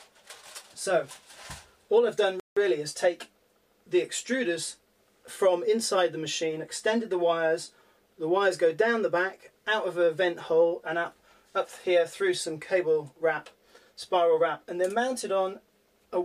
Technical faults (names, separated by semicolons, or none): playback stall